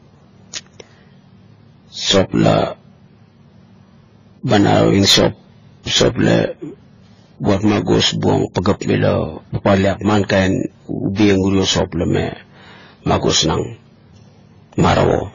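Speech, carrying transcoding between lossy codecs from start to finish. Nothing reaches above 15.1 kHz, and the sound carries layered artefacts at once, those of each codec in the chain heard together. That mixture likely comes from a low-rate AAC-LC encode passed through MP3 and then AAC-LC again. On a spectrogram, a hard ceiling at 15.1 kHz sits over patchy, blocky high bands with holes that shift frame to frame.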